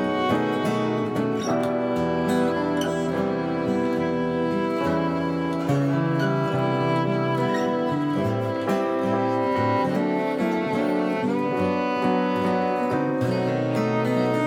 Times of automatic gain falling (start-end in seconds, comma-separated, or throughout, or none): none